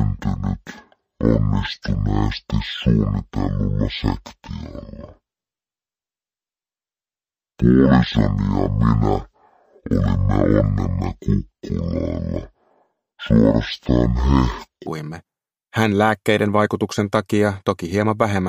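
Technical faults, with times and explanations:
0.0–14.87 s, stereo read as mono: the sound drags at half speed and sits an octave low, with a faint mirrored copy in the upper spectrum. Interleaved left and right samples were read in sequence as one channel, doubling every duration.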